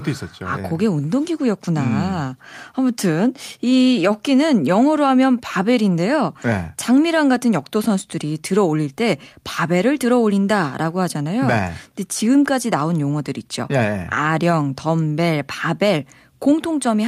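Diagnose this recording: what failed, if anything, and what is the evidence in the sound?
No fault found in this recording.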